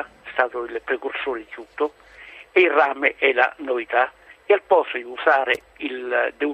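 A worn or dirty contact in the signal path briefly made and broke connection between 5.54 and 5.62 s. This loose connector crackle chops the sound on and off, and is heard as a short, irregular burst of scratchy crackling.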